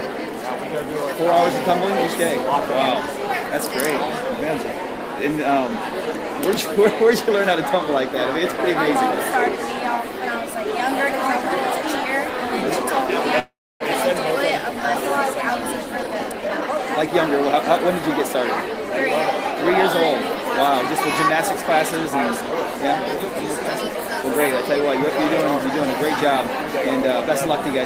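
From 13.39 to 13.83 s the sound stops and the last fragment carries on as a fading buzz, then about 0.27 s of silence before it resumes where it left off. It's a call audio freeze, likely caused by delayed packets emptying the jitter buffer.

A jitter buffer speed-up follows from 15.97 to 16.79 s. The receiver trims pitch-period pieces to cut accumulated delay, running at about 134% speed with roughly 0.3 s removed, so it sounds hurried at unchanged pitch. A second, gentler one from 22.10 to 24.24 s runs at 101% speed and removes only a few tens of milliseconds.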